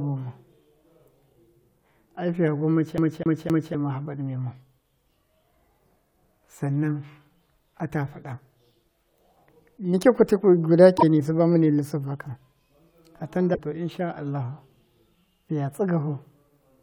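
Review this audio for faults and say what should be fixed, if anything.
From 2.98 to 3.75 s the speech stutters in a fast, even pattern: the same 0.26 s slice plays three times, with a brief mute at each jump back. That is a CD stuck on one turn. A scratch or flaw on the disc makes the laser lose its place and fall back one track at the same point on each rotation, so the player keeps replaying that loop. To prevent it, clean or replace the disc and re-rip it with a secure, error-checking ripper.

Two short blips cut into the speech, one from 10.94 to 11.03 s and one from 13.51 to 13.59 s, each lasting under a tenth of a second. They come from damaged data in a compressed stream. Corrupted bytes in the file make the decoder misread or discard the affected frames and lose sync while it searches for the next valid frame header. That produces a brief glitch in place of the audio. To prevent it, re-encode or re-fetch the file from an intact source and verify its checksum after transfer.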